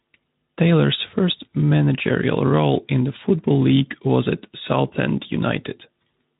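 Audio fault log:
No audible faults detected.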